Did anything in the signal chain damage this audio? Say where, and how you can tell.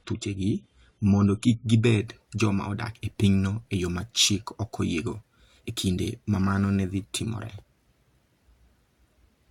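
Yes. The player opened an adaptive stream on a low-bitrate rendition and switched to a better one at 2.0 s, once it had gauged the connection. From 0.0 to 2.0 s the speech has nothing above 11.5 kHz, and codec artefacts are more pronounced. The upgrade lands abruptly with no gap, a step consistent with moving from roughly 32 kbit/s AAC to about 96 kbit/s. The stage is network delivery and the codec, not the recording itself.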